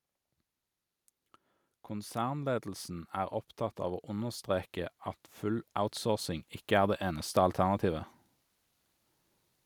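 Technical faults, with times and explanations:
1.88–4.49 s, automatic gain rising: the level creeps up by about 7 dB over roughly two and a half seconds, and the background lifts right along with the speech. That's the gain control deciding the input was too quiet and slowly turning itself up.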